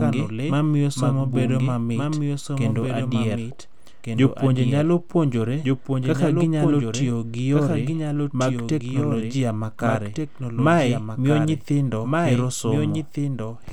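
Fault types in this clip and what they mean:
doubled audio track: A second full-band copy of the speech runs throughout the clip, trailing the original by roughly one and a half seconds and sitting around 5 dB below it. The copy has no reverberant tail or room colouring, so it sounds like a clean, detached repeat rather than a natural echo. The likely cause is a second capture through a slower signal path, or an edit that left two out-of-step copies layered together.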